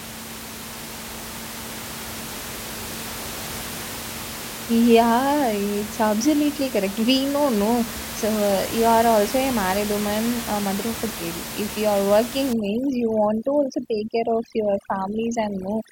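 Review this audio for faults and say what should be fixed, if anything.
Overdone noise removal runs from 12.53 s to the end at 15.92 s. The noise reduction cuts individual frequency bands hard whenever they sit near its noise estimate, so the room noise, about 11 dB below the speech, collapses into near silence with twinkling specks, and quieter parts of the speech vanish. To prevent it, lower the reduction strength or set a floor on how far each band can be cut, keeping some residual noise.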